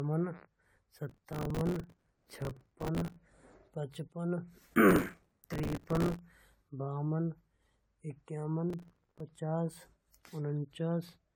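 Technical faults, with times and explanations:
Throughout: generation loss. The speech sounds swirly, hollow and smeared with soft attacks, likely from around ten passes through an AAC-type codec, each adding fresh quantisation damage.
1.09–3.16 s, 4.89–6.19 s and 8.70–9.20 s: processor overload crackle. Gritty tearing rides on the speech as missed deadlines replay stale snippets, which fits buffers of roughly 3 ms repeatedly arriving late.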